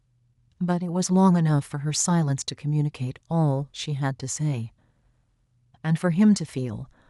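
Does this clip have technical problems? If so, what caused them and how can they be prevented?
No, there are no technical problems to report here.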